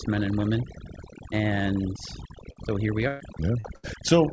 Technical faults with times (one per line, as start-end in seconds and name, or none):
0.00-4.32 overdone noise removal
2.52-2.59 short concealed packet loss
3.08-3.23 burst of packet loss
3.60-3.67 short concealed packet loss
3.76-3.86 burst of packet loss